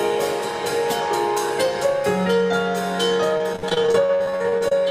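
From 3.37 to 4.72 s there's repeated packet loss (robotic sound): short holes, up to 53 ms, keep getting patched by stretching earlier audio, so about a third sounds choppy.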